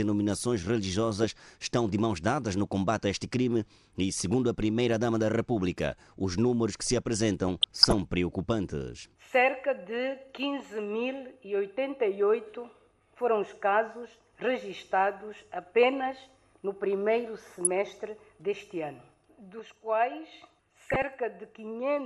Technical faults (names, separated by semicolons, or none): MP2 compression; DAB burbling